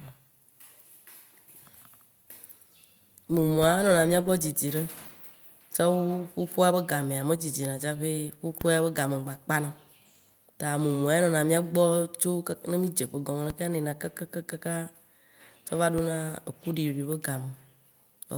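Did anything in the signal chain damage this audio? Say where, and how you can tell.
Yes. A DC step hits the speech at three points: 8.61 s, just before "be game", then 13.50 s and 15.98 s. Each is a low thump or click while the speech runs on intact. That points to the converter or analogue input, where the waveform's zero line jumps to a new offset. A high-pass near 5 Hz then drains the offset away over a fraction of a second. Unlike a dropout or digital click, nothing is missing, only a step in the baseline.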